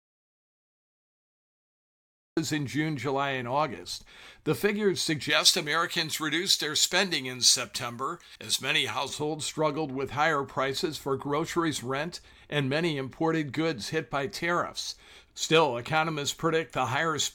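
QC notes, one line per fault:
0.00–2.37 s, audio dropout to silence: already under way at the start, the waveform is flat silence with no room tone, likely from a lost input.
5.30–9.09 s, pre-emphasis left on: treble boosted about 11 dB at 10 kHz relative to 1 kHz, consistent with an uncorrected J.17 curve. The spectrogram shows an over-bright upper band, and the sound is thin and sibilant.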